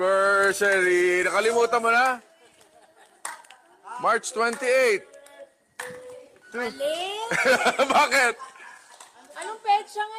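Gain pumping runs the whole way through: the gain ducks by around 5 dB under each loud sound, likely from an overdriven input hitting a fast limiter.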